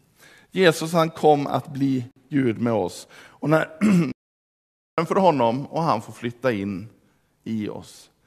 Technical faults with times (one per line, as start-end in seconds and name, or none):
2.11-2.16 gap at a join of encoded pieces
4.12-4.98 playback stall